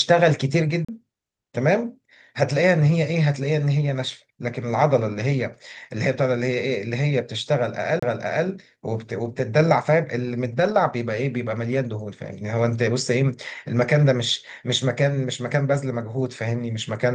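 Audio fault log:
0.85 to 0.89 s and 7.99 to 8.03 s, CD skip: the laser jumps to another turn of the disc spiral, so playback mutes very briefly and resumes from a different point in the speech.
7.46 to 7.48 s, 9.24 to 9.26 s and 15.74 to 15.76 s, lost packet rebuilt from error correction: each missing 20 ms packet is replaced by the low-bitrate Opus copy carried in the next packet, so there is no gap, only a short rougher, noisier patch.
10.52 to 10.74 s, lost packet rebuilt from error correction: a longer 120 ms stretch, which fits six separate 20 ms packets, is played from the coarse backup copies, so the speech turns grainy and noisy at those moments before returning to the call path's normal Opus sound, band-limited near 12 kHz.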